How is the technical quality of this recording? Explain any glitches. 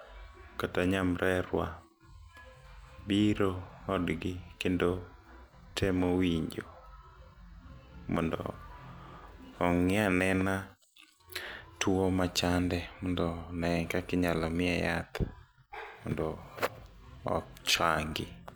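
One glitch stands out in the speech: a single repeated-frames stutter.

Repeated frames at 5.71 to 5.74 s, just before "temo winjo": a 32 ms block of the compressed stream reaches the decoder twice, so that slice of sound plays once more straight after itself. The short doubling sounds like a quick hiccup. The speech runs 32 ms longer than it should, which fits a single duplicated frame.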